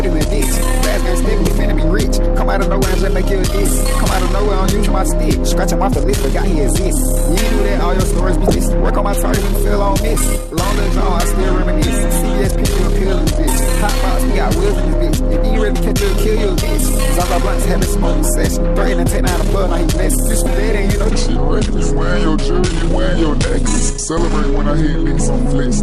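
You get three short blips from damaged data in the compressed stream, at 1.44, 8.47 and 20.43 s, each lasting roughly 30 ms. Those are spots where corrupted frames threw the decoder off, so it lost sync briefly and resynced on the next good frame header. Then from 21.10 s to the end there's a section at the wrong speed. It's running at about 0.81 times normal, so everything sounds slower and deeper, roughly four semitones down. That's likely from that stretch being played back against the wrong clock.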